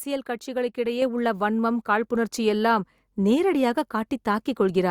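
A short speech recording with a microphone volume stepped up fault at 1.02 s: the input level jumps by about 4 dB in a single step, and the voice and the background noise get louder together. Automatic gain control in the call software judged the microphone too quiet and raised the device's input volume at once. On a waveform the envelope widens abruptly at that point; on a spectrogram every frequency band brightens together, including the noise floor between syllables.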